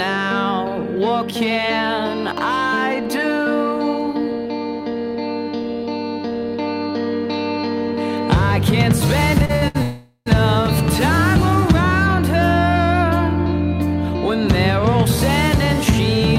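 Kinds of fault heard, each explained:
Repeated stalls (stutter): packets reached the receiver late or too slowly, so the jitter buffer ran dry four times between 9.45 and 9.76 s; the receiver stretched the last sound through each wait, up to 68 ms, so about 170 ms is filled in and the audio drags and stutters without losing anything.
Call audio freeze: packets were likely held up in transit and the jitter buffer emptied, so from 9.82 to 10.28 s the last sound is carried on and fades, ending in about 90 ms of silence before the audio resumes where it stopped, roughly 440 ms later.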